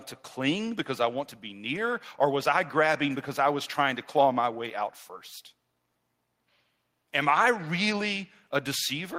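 No technical faults are audible.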